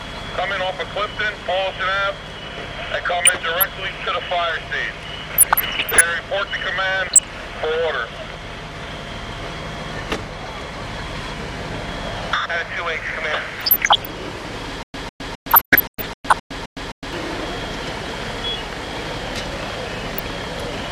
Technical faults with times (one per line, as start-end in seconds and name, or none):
3.25-3.66 DAB burbling
5.34-6.09 DAB burbling
7.04-7.30 DAB burbling
13.55-14.13 DAB burbling
14.83-17.13 stutter with silent gaps
15.50-16.33 DAB burbling
19.96-20.23 DAB burbling